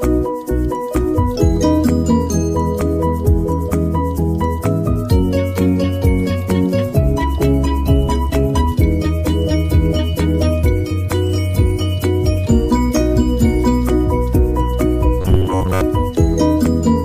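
Robotic sound from repeated short buffers, 15.21 to 15.81 s: a rigid, metallic 93.8 Hz buzz, likely from a 10.7 ms fragment looping in place of most of the real audio.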